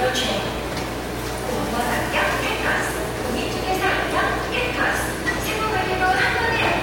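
Nothing stood out on listening to this recording of sounds.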